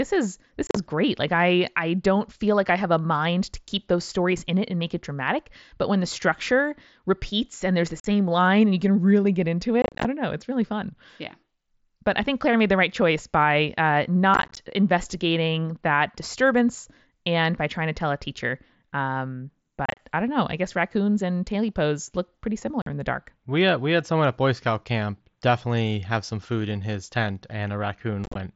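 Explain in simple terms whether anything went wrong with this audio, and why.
Unconcealed Bluetooth headset packet loss briefly chops the speech at 0.67, 8.0, 9.82, 14.34, 19.86, 22.82 and 28.24 s: lost radio packets leave abrupt, crackly gaps.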